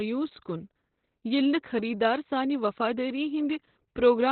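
Opus voice compression at a very low rate is squeezing this speech throughout: the encoder appears to be running its SILK linear-prediction coder in narrowband mode, which fits a bitrate around 8 kbps. Nothing survives above about 4.4 kHz, so the voice sounds muffled and boxy, and the coarsely coded excitation leaves it hoarse and faintly robotic, with heavy codec damage from start to finish.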